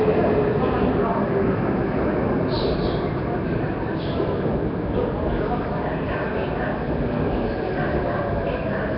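From start to finish the sound carries a rough, hissy halo and a smeared, underwater quality, with nothing above about 5.3 kHz. The likely cause is heavy Nellymoser compression, the old Flash microphone codec, at a rate that fits roughly 22 kbps. It codes short blocks on a tight, fixed bit budget, so weak bands get no bits and are filled with noise. That noise fill produces the hiss, and the coarse blocks smear the detail.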